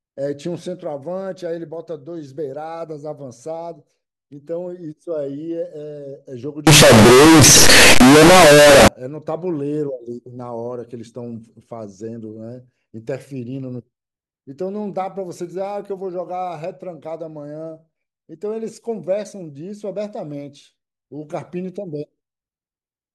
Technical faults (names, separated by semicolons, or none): float read as integer